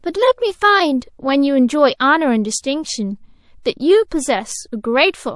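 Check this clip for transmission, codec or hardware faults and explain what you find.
Two codec faults are audible in the speech. Heavy MP3 compression, likely at a low bitrate around 48 kbps, trims the treble and leaves the audio watery and swirly throughout, with smeared consonants.

Pre-echo occurs at 0.99, 1.97, 3.63 and 4.08 s. Long transform blocks, with no switch to short blocks, spread quantisation noise ahead of sharp attacks. Each attack is preceded by a hiss lasting 22 to 31 ms and about 11 to 17 dB above the surrounding noise.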